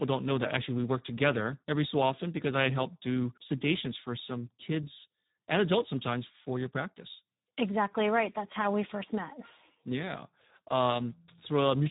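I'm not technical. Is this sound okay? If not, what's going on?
No. The whole recording has passed through the Speex codec, an older voice-chat compressor, at a very low quality setting. It squeezes speech so hard that voices turn noisy and hoarse, and everything above about 3.8 kHz is gone, leaving a muffled, telephone-like sound.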